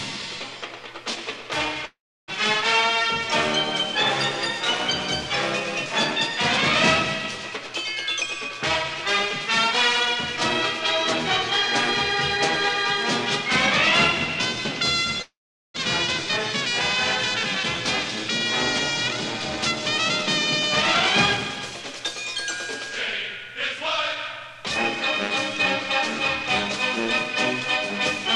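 At 1.85 s and again at 15.22 s the audio breaks in what sounds like a long network dropout, likely a stall in packet delivery. Each gap starts with a brief fading buzz, then sits silent for about 0.3 s and 0.4 s respectively. In each, about 0.4 s of audio never returns, and playback resumes at 2.32 s and 15.78 s.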